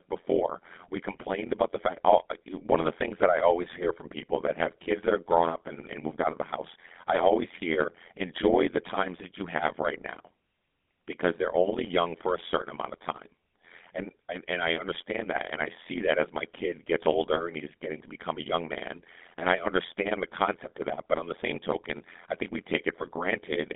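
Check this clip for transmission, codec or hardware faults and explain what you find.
Two faults run through the whole speech clip, one from frame processing and one from the codec.

Overlap-add ripple, from start to end: the audio was split into windowed frames and rejoined with overlaps that do not sum to a steady gain. The level swings by about 60 dB roughly 100 times a second, producing a metallic buzz with extra tones around the speech.

GSM full-rate codec, from start to end: the speech passes through a vocal-tract model driven by sparse, regularly spaced pulses, which fits a 13 kbps GSM full-rate stream. The band sits around 200 Hz to 3.6 kHz, with nothing above 3.8 kHz, giving a muffled, buzzy, gravelly texture.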